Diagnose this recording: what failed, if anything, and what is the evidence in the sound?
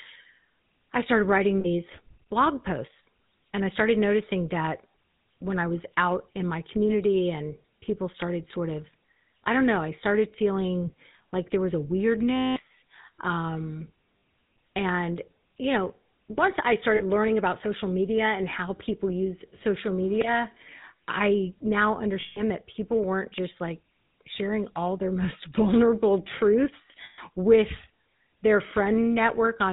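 The codec stage failed. The GSM full-rate codec runs throughout, which fits its 13 kbps mode. Nothing passes above 4 kHz. The speech has a buzzy, gravelly roughness. This comes from modelling the vocal tract and driving it with sparse, regular pulses that keep only every third excitation sample.

The network also failed, with lost GSM frames. They occur at 1.60–1.66, 12.36–12.61, 14.18–14.22, 16.96–17.02, 22.20–22.41 and 27.04–27.19 s. Each gap turns into a rough, metallic ring. The decoder repeats the last good frame's settings, so the longer gaps ring longest.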